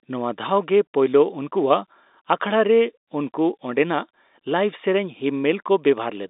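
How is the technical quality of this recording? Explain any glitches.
No glitches turn up here; the speech comes over the G.711 telephone coding as a normal phone call would, with the usual narrow band that cuts off a little below 3.8 kHz.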